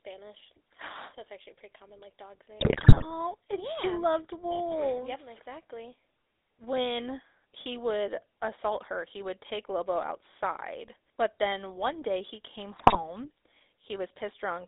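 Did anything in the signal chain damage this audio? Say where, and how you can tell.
Yes. The GSM full-rate codec is present throughout at the codec stage. The whole recording is confined to a band of roughly 300 Hz to 3.7 kHz, with a buzzy, gravelly roughness on the voice, which fits the 13 kbps full-rate coder. It models the vocal tract with a filter and feeds it a coarse pulse excitation that keeps only every third sample. The missing fine detail is what produces that rasp.

GSM bit errors, a network-stage fault, occur from 2.60 to 3.13 s, after "pretty common like dog's" and before "and yeah she loved", and again from 12.76 to 13.01 s, after "one day he came". In both spans the sound breaks into squawks, pops and gargling. Corrupted bits on the radio link reached the decoder and scrambled the filter, pitch and gain values for individual frames, which bent the spectrum and spiked the level. 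The first burst is longer and denser, consistent with about 20 damaged frames against roughly ten in the second.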